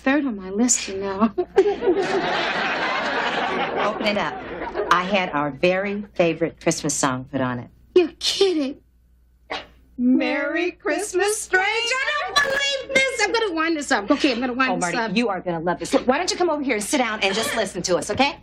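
From 4.05 to 4.30 s and again from 12.38 to 12.60 s, processor overload crackle: missed buffers of roughly 1.5 ms drop to silence, giving gritty tearing, visible as waveform gaps and broadband vertical streaks.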